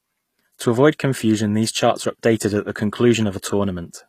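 From start to finish, the speech was likely squeezed through HE-AAC compression at a low bitrate, consistent with roughly 24 kbps. The coder keeps only the lower spectrum and synthesises the treble by copying lower bands upward, so the highs are an approximation rather than the original. The damage is plainly audible: sibilants sound gritty and metallic, upper harmonics don't line up with the lower ones, and nothing remains above 14.9 kHz.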